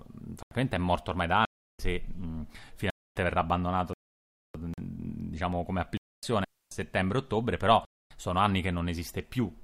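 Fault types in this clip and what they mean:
Block of digital silence: six hard-edged holes that cut straight to silence and back. They run from 42 ms to a 341 ms gap, and three last 256 ms. The lengths fit buffers of 4096 and 16384 samples replaced by zeros.
Rebuffering stall: the sound stops dead for about 0.61 s, from 3.93 to 4.55 s, then resumes exactly where it left off. Nothing is lost, but the clip runs longer. The player ran out of downloaded audio and waited for more to arrive.
Digital wireless dropout: a clean 273 ms hole of near silence starting at 6.44 s, entered and left with a very short fade and no burst of noise on either side. The wireless receiver lost too much data and muted its output until the link recovered.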